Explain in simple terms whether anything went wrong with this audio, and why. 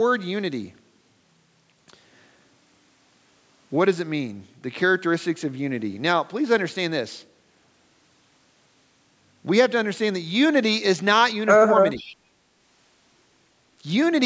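Two problems happen close together near the end of this speech clip.

From 11.97 to 12.15 s, a faint, delayed copy of the speech slips through. It arrives almost half a second late. This is an echo leak. It likely comes from a speakerphone whose echo canceller missed some sound.

Between 11.99 and 12.05 s, the speech briefly dips sharply, for less than a tenth of a second. This is speech suppressed in double talk. The echo canceller likely could not separate the talker from the echo, so it turned both down.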